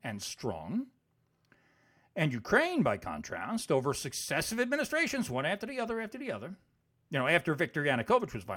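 No technical faults can be heard anywhere in this speech.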